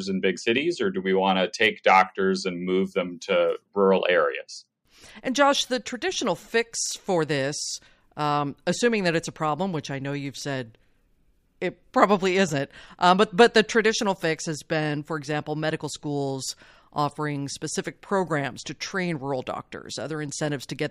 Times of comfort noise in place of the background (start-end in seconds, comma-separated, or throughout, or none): none